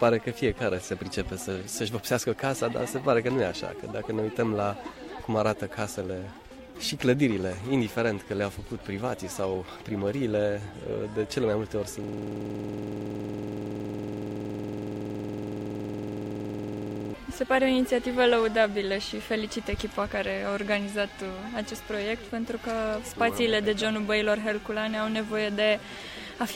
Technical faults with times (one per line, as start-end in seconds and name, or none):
12.04-17.14 system hang loop